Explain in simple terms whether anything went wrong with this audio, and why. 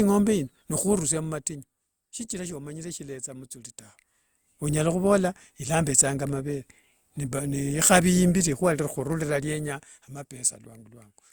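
Something did go wrong: the speech carries generation loss from start to finish. It has a swirly, hollow quality, and the beginnings of sounds come out smeared instead of crisp, more than a single round of compression would leave behind. The likely cause is that it was squeezed through a lossy codec about three times, with each pass adding its own fresh layer of damage on top of the last.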